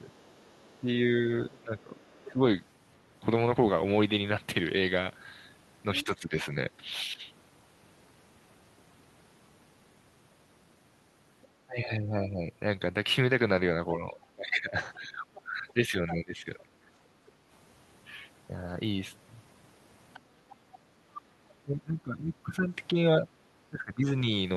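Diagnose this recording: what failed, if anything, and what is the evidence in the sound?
The failure is in call processing, specifically the echo canceller on the talker's end.

Speech suppressed in double talk occurs at 0.0–2.41 s, 6.04–7.22 s, 11.65–16.69 s and 21.29–24.26 s. In each span the talker's level dips in pieces, by roughly 10 dB in the shortest span and up to around 20 dB in the two longer ones. The likely mechanism is the canceller failing to separate near speech from loudspeaker echo and attenuating both.

The other side's voice leaking through is heard at 0.11–2.29 s, 5.95–6.16 s, 11.42–16.14 s and 20.14–21.21 s. The first stretch is very faint, around 35 dB under the speech. The others sit around 15 dB below it. This is likely residual echo: the far end, played on the loudspeaker, reaches the microphone and is only partly cancelled.

Background gated by the echo canceller shows at 17.11–17.48 s and 20.6–21.01 s. 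The room sound drops by about 6 dB for a fraction of a second each time, then recovers. Both dips fall where the loudspeaker is active, the second inside the 20.14–21.21 s leak. The canceller clamps the microphone while far-end audio plays and releases it afterwards.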